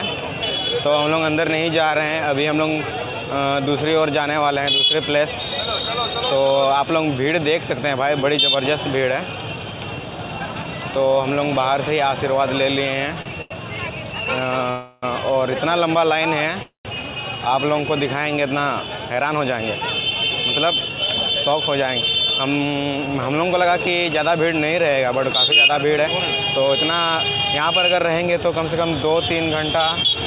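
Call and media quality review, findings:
Held sound at 13.22 s and 13.42–13.52 s, stretched about 36 ms and 89 ms. Short stall from a late packet: jitter buffer ran empty, last sound extended, nothing lost.

Sound fades to a buzz and near-silence at 14.70–15.04 s (320 ms) and 16.63–16.87 s (223 ms, 130 ms quiet). Call audio freeze, likely delayed packets draining the jitter buffer; playback resumes where it stopped.

Hurried playback at unchanged pitch at 18.69–20.11 s (107%), 20.82–21.62 s (111%), 25.16–27.16 s (107%). Jitter buffer speed-up: pitch-period chunks cut, roughly a tenth of a second or more in total per stretch, to shed excess delay. Band-limited to 4 kHz by the G.711 mu-law call path.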